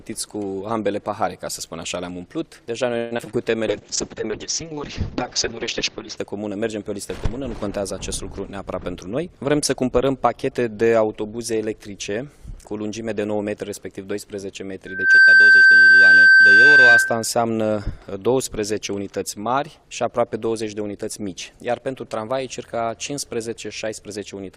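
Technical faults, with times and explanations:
2.97–3.20 s, long network dropout: the sound breaks into a buzzy continuation of itself that fades over about 0.21 s, and roughly 60 ms is simply missing when it resumes. This is likely a network outage, with the receiver extending the last sound until packets arrived again.
3.24 s and 3.31 s, short concealed packet loss: two brief smears or wobbles, each replacing about 20 ms of audio. A packet failed to reach the decoder in time, so the receiver bridged the gap with a continuation of the preceding sound, then blended back.
3.28–3.64 s, jitter buffer slow-down: the audio drags at about 87% speed with unchanged pitch, stretched by about 56 ms. The buffer was running short, so the receiver repeated single pitch periods and bits of pauses to rebuild its reserve.
3.69–6.24 s, call bitrate drop: the sound turns rough and muffled for about 2.5 s, losing everything above about 8 kHz. 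The bandwidth estimate collapsed and the encoder fell from 48 to 6 kbit/s, coding coarsely and cutting high frequencies.
8.46–10.11 s, jitter buffer speed-up: the audio hurries along at about 108% speed with the pitch intact, shedding roughly 150 ms. Too much audio had piled up in the buffer, so the receiver trimmed short pitch-period pieces repeatedly to reduce delay.
14.86–17.28 s, loudspeaker feedback squeal: a 1.6 kHz tone swells over about 0.3 s into a squeal standing roughly 15 dB above the signal. The microphone was picking up its own loudspeaker, and at that frequency the loop gain exceeded one, so the tone fed itself.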